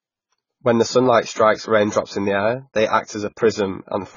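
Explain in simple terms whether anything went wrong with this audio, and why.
The speech sounds dull and smeared throughout, with nothing above 7 kHz. Heavy AAC compression, squeezing the sound too hard, is the likely cause.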